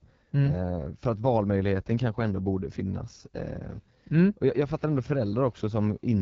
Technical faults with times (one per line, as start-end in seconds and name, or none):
0.00-6.22 AMR wideband (HD Voice) codec